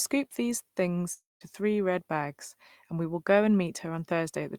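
Speech with a likely long network dropout from 1.13 to 1.43 s: the last sound smears into a fading buzz, then about 0.18 s of silence, and about 0.28 s of speech is lost. A spectrogram shows smeared harmonics dissolving into a blank gap.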